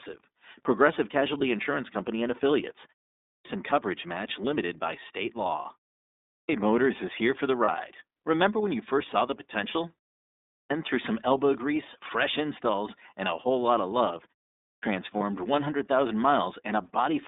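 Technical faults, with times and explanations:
Throughout: iLBC codec, narrowband coding of 30 ms frames passing roughly 250 Hz to 3.7 kHz; spectrogram shows nothing above 3.7 kHz, speech sounds rough and synthetic.
3.21, 6.21, 10.46 and 14.57 s: clipped start after a pause, output device waking late swallows about 240 to 280 ms of onset; waveform jumps abruptly from flat silence.
7.65 and 15.17 s: lost iLBC frames, one 30 ms frame concealed by repeating the last pitch cycle with noise; brief buzzy smear, spectrogram shows flat repeated harmonics.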